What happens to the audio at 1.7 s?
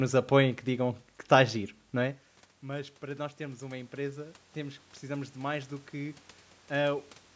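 Nothing goes wrong with the audio at 1.7 s; the speech comes through intact there.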